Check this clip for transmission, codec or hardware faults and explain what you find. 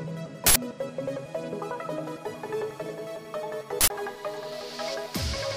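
Two uninitialised buffer faults, at 0.46 s and 3.81 s. Each time, a buffer was sent to playback before any audio had been written into it, so leftover memory was played as samples. The result is a sudden, loud burst of digital noise lasting about 93 ms, which fits a 4096-sample buffer.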